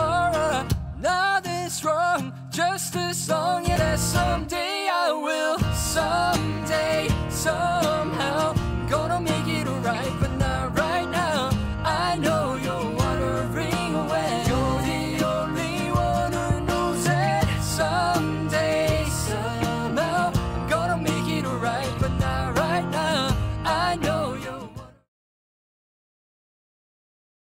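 At 3.75 s there is a skip ahead: about a second of audio is missing, and playback jumps straight from one side of the gap to the other with no fill. The join is almost seamless, so it is the sudden change of content that gives it away. Audio that arrived later was already queued, and the jump drops the delay by roughly a second.

A jitter buffer speed-up runs from 18.09 to 20.94 s at 101% and again from 23.00 to 24.98 s at 102%. Each time, the receiver had more audio buffered than its target, so it removed short pitch-period-length pieces in succession, about 50 ms in total per stretch. The sound plays slightly faster at unchanged pitch. The second stretch runs into the smooth fade-out that begins around 24 s and ends at 25.10 s.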